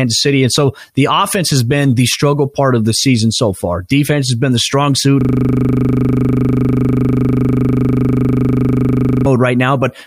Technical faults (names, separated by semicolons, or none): system hang loop